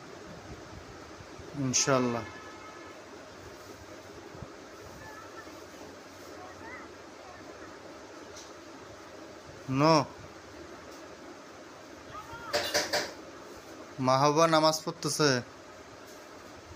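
No technical faults can be heard anywhere in the clip.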